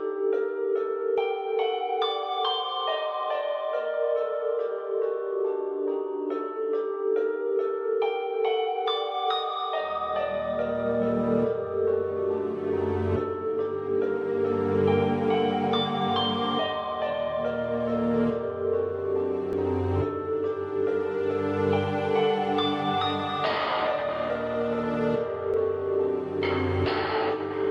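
At 19.53 s and again at 25.54 s, overlap between stream segments causes a tiny skip. Overlapping timestamps at a 6-second segment boundary made the player cut away real sound.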